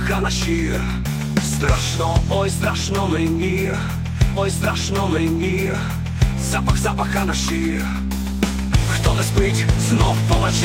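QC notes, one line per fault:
4.33–6.34 s, stream segment repeated: about 2.0 s of programme plays a second time after a small blip at the jump back, because the player queued the same segment twice. Unlike a buffer stutter, the whole stretch replays intact rather than a short fragment looping.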